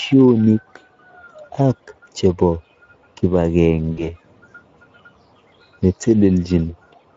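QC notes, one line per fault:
throughout Speex codec: The encoder runs a low-rate CELP setting, the damage pointing to roughly 16.8 kbps, with too few bits to model the excitation. The speech comes out plainly hoarse and noisy.
3.91–4.11 s VoIP packet loss concealed by the speech codec: About 60 ms of packets went missing, which fits three 20 ms frames. The decoder kept repeating its last pitch and filter at falling gain, so the speech smears and fades and stays weak briefly after recovery.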